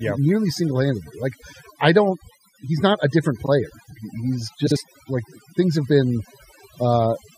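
Overdone noise removal runs through the whole speech clip. A noise reducer set far too aggressively has pushed individual frequency bands down or out whenever they came close to its noise estimate. Quieter parts of the voice were caught and cut along with the noise. The background is left as near silence sprinkled with twinkling specks, and the voice has its softer detail stripped away.

Frames out of order appear first at 3.43 to 3.49 s, just after "not a different". Two neighbouring blocks of about 23.2 ms each were decoded in swapped order, so this 58 ms stretch plays with its halves exchanged. It is heard as a brief garbled flutter, and no time goes missing. The same fault returns at 4.66 to 4.77 s, just before "like things have been", this time with swapped blocks of about 46.4 ms, so the flutter lasts longer.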